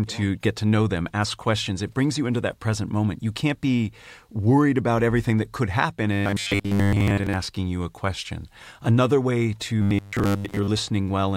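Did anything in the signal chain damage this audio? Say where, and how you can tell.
Yes: robotic sound from repeated short buffers, from 6.13 to 7.34 s and again from 9.82 to 10.69 s. The speech becomes a rigid 100 Hz buzz. The likely cause is the driver or buffer stage replaying the last 10 ms while most real audio is skipped. A spectrogram would show fixed 100 Hz-spaced harmonic lines, and the waveform would show identical repeating 10 ms blocks.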